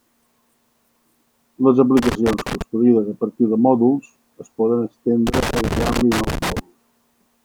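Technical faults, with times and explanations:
1.97–2.62 s and 5.27–6.59 s, loose connector crackle: a worn or dirty contact keeps making and breaking, chopping the speech into an irregular scratchy burst, first just before "a partir de mòduls", then right after "de mòduls es poden".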